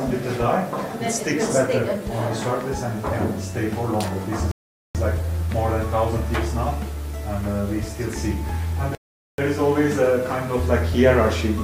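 At 4.51 s the audio halts in a rebuffering stall: the player has run out of downloaded data and waits for more, then picks up exactly where it stopped at 4.95 s, adding about 0.44 s of silence with nothing skipped. The same happens again from 8.95 s to 9.38 s, adding about 0.43 s. On a waveform each stall is a flat silent gap; on a spectrogram, a clean vertical blank band.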